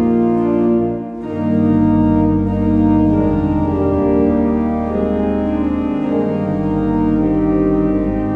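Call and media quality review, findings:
Nothing stood out on listening to this clip.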